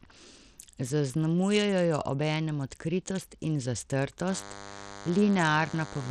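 The whole clip carries damage that likely comes from Bluetooth SBC compression. The treble is thin and unstable. Upper detail drops out and flickers back. A gritty noise clings to the speech, with aliasing riding on it. SBC splits the sound into a few wide bands and shares out bits crudely. The top bands get too few bits or none at all, and the rest are coarsely quantised. The harshness fits a starved bit budget of around 80 kbps.

At 4.29 s a DECT cordless phone buzz starts and runs to the end. It is a steady, thin buzz at 100 Hz, rich in harmonics. It sits roughly 15 dB below the speech. A nearby DECT handset or base sends a radio burst every 10 ms. The audio circuitry rectifies those bursts, and each one becomes a tick in the signal. Their regular spacing fuses into this buzzing tone.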